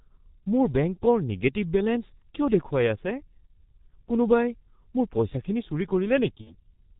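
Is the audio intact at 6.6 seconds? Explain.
No. The G.723.1 codec runs through the whole clip at about 6.3 kbit/s. It models speech coarsely in 30 ms frames and drops everything above 4 kHz. The speech sounds heavily muffled and hoarse, with smeared consonants.

Just before this moment, VoIP packet loss concealed by the speech codec covers 6.41 to 6.56 s, which fits about 60 ms of lost audio. The decoder extended its last pitch and filter with falling gain, giving a fading buzzy tone or coloured noise. Because each frame builds on the last, the speech stays weak or distorted into 6.6 s.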